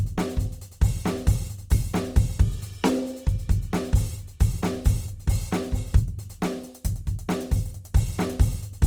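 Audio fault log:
throughout: Opus compression. The music was likely squeezed through Opus in its CELT music mode at a low rate, which fits a bitrate of about 24 kbps. With too few bits, the encoder keeps each band's energy but refills the detail by folding lower bands or injecting noise. Tones therefore come out grainy, rough and noisy rather than swirling, and the damage is plainly audible. Bandwidth stays full, with content reaching up to 20.2 kHz.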